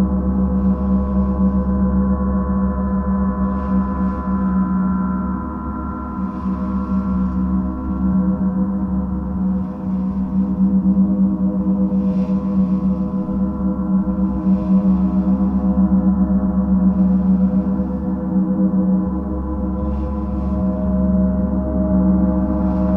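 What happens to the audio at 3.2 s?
Nothing goes wrong at 3.2 s; the audio plays through that moment intact, with no fault to be heard.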